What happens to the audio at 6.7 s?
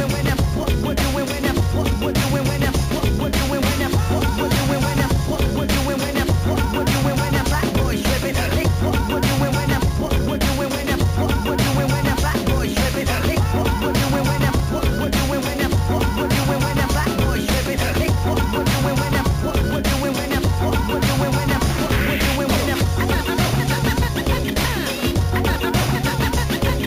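At 6.7 s the audio carries imaging from sample-and-hold upsampling, present across the whole clip. The rate was raised from 16 kHz to 44.1 kHz by holding each sample with no smoothing filter, so a mirrored copy of the spectrum fills roughly 8 kHz to 16 kHz, about 19 dB below the wanted signal. It sounds like a bright, metallic fizz that rises and falls with the sound, its lowest band moving opposite to any pitch change.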